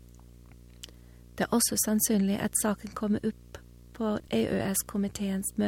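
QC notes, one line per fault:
Throughout: video or display buzz. A steady 60 Hz buzz with a fizzy hash riding above it sits under the speech, around 25 dB below it. A screen or video cable is coupling into the audio path at the picture's field rate.
4.2–4.28 s: chunks out of order. The speech briefly jumbles. A 40 ms chunk arrived one chunk late and played after the audio that should follow it. Nothing is lost, but the reordering leaves three hard joins.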